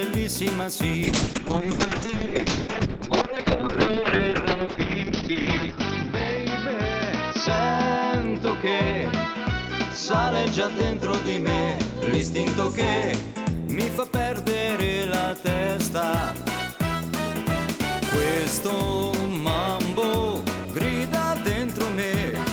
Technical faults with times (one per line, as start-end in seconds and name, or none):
1.04-13.59 call bitrate drop